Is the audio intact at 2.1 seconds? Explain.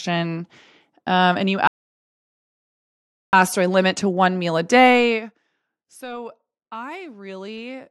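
No. At 2.1 seconds the speech sits inside a rebuffering stall that runs from 1.67 to 3.33 s. Right after "and you", the sound drops to silence. The player has used up all the audio it had downloaded, so it stops and waits for more data. When enough arrives, playback resumes exactly where it halted, with "do I limit to". No speech is lost. The pause simply adds about 1.66 s to the clip.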